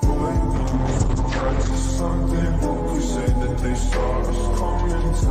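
From 0.57 to 1.77 s, a call bitrate drop to 9 kbps leaves it rough and muffled; spectrogram content above 8 kHz vanishes.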